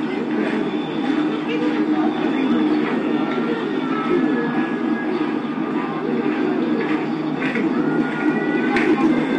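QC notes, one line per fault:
Throughout, hard clipping: the everyday sounds were driven about 9 dB past what the signal path could hold, so the loudest peaks, around one percent of samples, are sliced flat. Those squared-off tops produce crackle on the peaks. On the waveform the peaks appear as flat plateaus. On the spectrogram, vertical smears of harmonics run up into the high kHz wherever clipping occurs.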